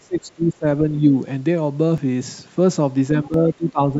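From the start to 0.66 s the speech is pulled down hard, by as much as about 20 dB, for roughly half a second. This is speech suppressed in double talk, likely caused by an echo canceller that could not tell the near talker from loudspeaker echo while both sides spoke, so it attenuated everything. A milder dip, only about 5 dB, follows between 0.97 and 1.14 s.

At 1.98 s the sound jumps forward slightly. This is a dropped buffer (overrun): the samples were likely overwritten before the software read them, so a few milliseconds of audio vanished and the two edges were spliced together without any gap.

From 3.12 s to the end the double-talk suppression returns, with drops of about 15 dB spread across roughly half a second. A second overrun at 3.34 s lands inside that stretch. The call microphone processing also cuts the lowest bass. That is normal for a call path and is not a fault.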